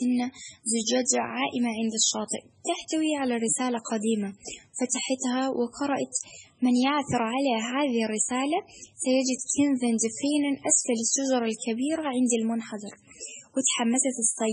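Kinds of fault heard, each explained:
Low-bitrate audio saved at a high bitrate: a very low-bitrate MP3 encode, likely near 16 kbit/s, was re-saved at a much higher rate that cannot restore what was discarded, so the speech keeps the first encode's artefacts throughout, with nothing above 10.4 kHz.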